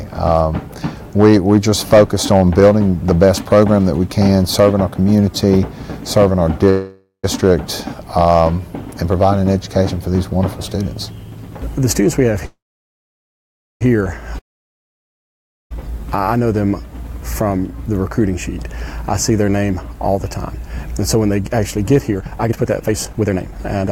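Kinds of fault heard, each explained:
Call audio freeze: Twice the sound stalls and then picks up exactly where it left off, most likely because packets were held up and the jitter buffer ran dry. From 6.69 to 7.26 s the last sound is stretched into a fading buzz for about half a second, with roughly 0.11 s of silence at the end. From 12.45 to 13.83 s the hold lasts 1.36 s and is mostly silence, about 1.23 s. Nothing is lost either time; a gap is simply inserted.
Long network dropout: From 14.39 to 15.72 s the audio cuts out and doesn't come back where it stopped, likely because a stretch of packets never arrived at all. The last bit of sound fades as a brief hiss, then there's about 1.29 s of near silence. When playback resumes, about 1.32 s of the original is gone, so the audio jumps ahead rather than continuing. That skip is what separates it from the freezes just before it.
Jitter buffer speed-up: From 16.95 s to the end, everything runs about 20% fast, at 120% speed, but the pitch stays put. 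That's the receiver trimming a backlog in its buffer, snipping out tiny pitch-period-sized pieces over and over until the extra delay is gone. Across those final seven seconds, around one and a half seconds get shaved off. The result sounds noticeably hurried, with the pacing compressed while the tone stays where it was.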